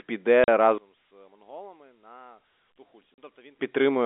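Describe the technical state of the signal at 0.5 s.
Just before 0.5 s, from 0.44 to 0.48 s, the speech drops out in a 40 ms gap caused by packet loss filled with silence. Two consecutive packets failed to arrive, which fits a 20 ms packetisation, and the receiver inserted digital silence rather than concealing the loss. The hole has abrupt edges, set within the narrowband G.711 telephone band around it.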